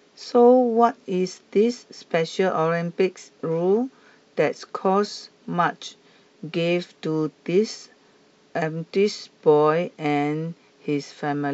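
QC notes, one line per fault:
No faults were found in this speech clip. Nothing in it needs a QC entry.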